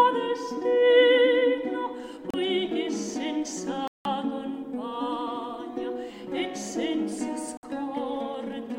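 The audio cuts to clean silence three times, at 2.30 s, 3.88 s and 7.57 s, for about 33, 176 and 59 ms. Each time the sound then picks up again. It is likely a Bluetooth stall, where the headphone buffer briefly ran dry.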